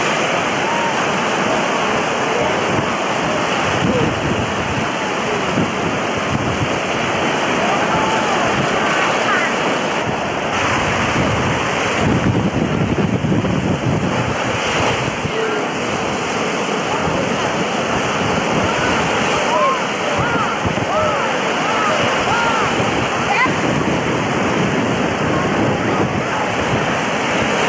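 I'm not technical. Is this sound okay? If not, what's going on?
Yes, nothing in this sound is broken or faulty. It went through an ordinary internet call connection, which is why it has the slightly narrowed, phone-call quality of a call line that carries nothing above about 8 kHz.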